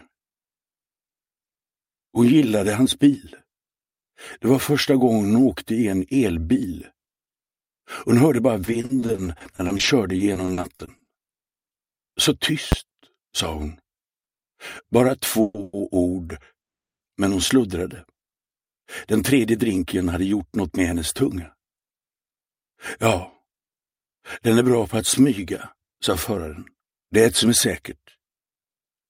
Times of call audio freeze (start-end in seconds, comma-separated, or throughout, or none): 15.41-15.75, 16.61-17.02